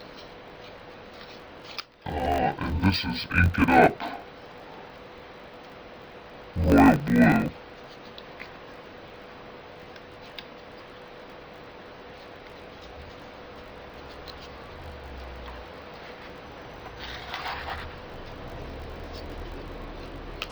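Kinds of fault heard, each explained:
Interleaved audio read as planar, throughout: each 20 ms block of alternating left and right samples is split the wrong way, its first half sent to the left channel and its second half to the right, so each side plays its half stretched across the whole block. The result sits an octave low and sounds dull and robotic, with a buzz at the 50 Hz block rate where the mismatched halves meet at every block boundary.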